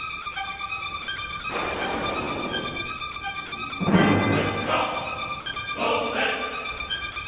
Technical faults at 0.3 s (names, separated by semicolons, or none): sound chopped by the voice detector